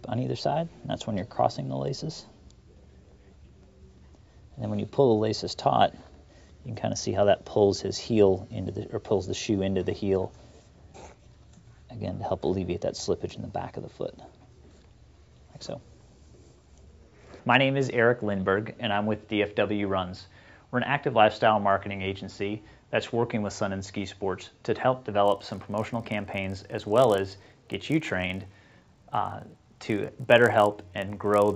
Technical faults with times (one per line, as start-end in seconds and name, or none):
25.24-31.55 resampler restarted on every block